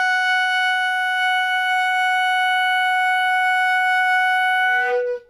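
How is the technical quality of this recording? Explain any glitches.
The technical quality is clearly compromised, with audible HE-AAC compression throughout the music. The treble is likely being rebuilt by spectral band replication: only the lower spectrum is coded, and the top is synthesised by copying lower bands upward under a coarse envelope. The result is treble that stays bright yet sounds gritty and metallic, with upper harmonics that don't align with those below. A plain low-pass or muffled codec would sound dull instead. Everything stops at 15.4 kHz, which fits a very low bitrate around 24 kbps.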